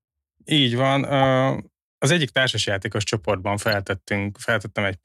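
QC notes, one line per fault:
1.22 s: corrupt frame decoded. A short chirp peaking around -15 dBFS, consistent with one damaged compressed frame whose misread gains put energy at wrong frequencies.
3.71 s, just after "az egyik társasjátékos csoportban": corrupt frame decoded. A longer blip near -15 dBFS, pointing to roughly two consecutive frames decoded with flipped bits.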